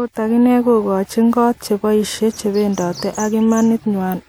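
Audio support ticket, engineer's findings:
Steady buzz at about 43.1 Hz under the speech throughout, speed unchanged. Block size mismatch (truncated): block tails discarded between stages; rate fits 1024-sample blocks.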